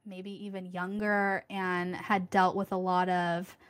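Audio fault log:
0.05–2.38 s, automatic gain rising: the level climbs steadily by about 11 dB across these two and a bit seconds, with the speech and the background noise swelling together. That shared rise is the mark of an automatic gain control that judged the input too quiet and gradually turned its gain up. On a waveform the envelope widens as a slow ramp, and a spectrogram shows every band brightening together, noise floor included, until the level settles near 2.38 s.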